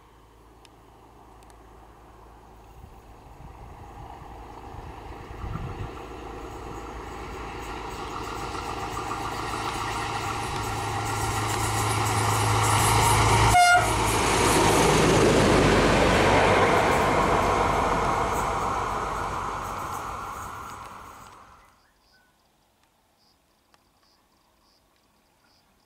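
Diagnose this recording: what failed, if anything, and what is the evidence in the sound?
Nothing stood out on listening that would point to a failure at any stage of the chain.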